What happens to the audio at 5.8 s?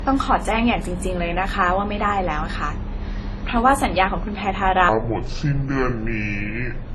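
At 5.8 s the speech sits inside a section at the wrong speed, running from 4.89 s to the end of the clip. It plays at about 0.61 times its recorded rate, most likely because it was fitted to the wrong clock, so it sounds slow and dragged and pitched down roughly ten semitones.

The same moment also carries the clip-wide signs of transcoding between lossy codecs: nothing above 16.2 kHz, with two distinct layers of coding artefacts heard together. This likely comes from a low-bitrate WMA encode, around 32 kbit/s, that was later re-encoded to Opus at a similar rate.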